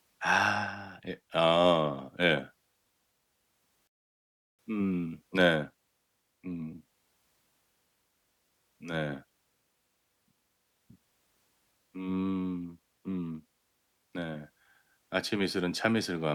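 At 3.87 s the speech stops dead and silence holds until 4.59 s. This is a rebuffering stall. The player used up the audio it had downloaded and waited for more data to arrive. About 0.71 s of dead air is inserted. When playback returns, it picks up at the exact point where it stopped. No speech is skipped or lost. The clip simply runs longer by the length of the gap.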